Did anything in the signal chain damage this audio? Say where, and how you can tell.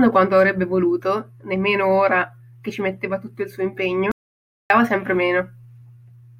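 Yes. At 4.11 s the speech cuts off mid-flow and the audio drops to total silence until 4.70 s, losing about 0.59 s, before resuming abruptly. This is an audio dropout to silence, most likely at the input or link stage: the source was lost while the recorder or encoder kept writing silence. The waveform shows a flat, silent stretch, and the spectrogram shows a blank column with even the room-tone noise floor gone.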